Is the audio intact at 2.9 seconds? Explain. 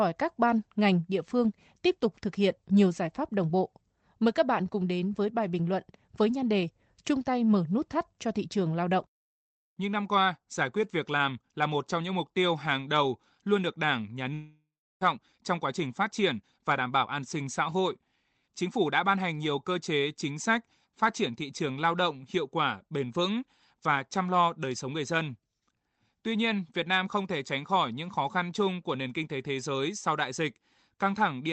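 Yes, the audio at 2.9 seconds is intact, with no dropout, glitch or other fault at that moment beyond the ordinary band-limited sound of the call path it passed through.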